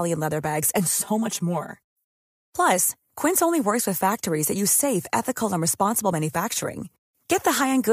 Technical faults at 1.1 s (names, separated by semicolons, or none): channel delay (comb filtering)